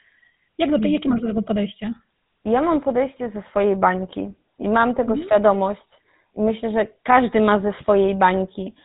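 GSM full-rate codec damage runs throughout the speech, plainly audible: regular-pulse excitation modelling leaves a buzzy, gravelly roughness, and nothing passes above 3.8 kHz, fitting 13 kbps coding.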